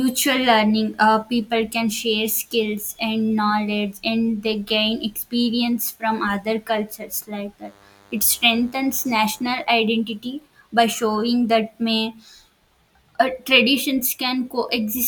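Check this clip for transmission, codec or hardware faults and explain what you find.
One hardware-related fault is present. From 7.64 to 9.64 s, DECT cordless phone buzz: radio bursts every 10 ms are rectified by the audio circuitry, producing a thin 100 Hz buzz with many harmonics, roughly 30 dB below the speech.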